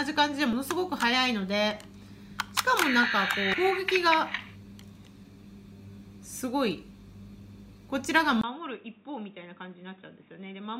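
At 0.53 s and again at 3.54 s there's a quick blip from damaged data in a compressed stream. A few bytes went bad, the decoder lost its place and hunted for the next good frame, so each spot is a tiny glitch lasting about 4 ms.

At 8.41 s the sound drops out for about 20 ms and comes back duller and boxier, with nothing above 3.8 kHz, roughly 10 dB quieter, and a new noise floor around 30 dB under it. That's likely the input switched to a poorer device.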